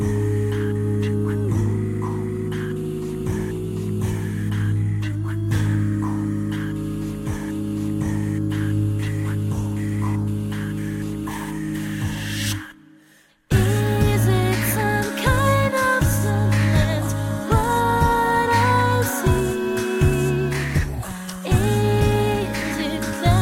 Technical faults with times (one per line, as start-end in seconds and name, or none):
none